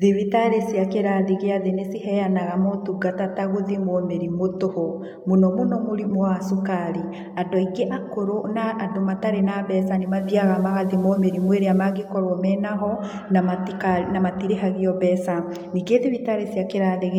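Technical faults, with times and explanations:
9.96–12.16 s, digital radio blending to analogue: the receiver lost its digital stream, cross-faded over 313 ms to the FM broadcast, and returned just before "menaho na". Unlike a dropout, sound continues, with hiss roughly 35 dB down and a level shift of about 3 dB.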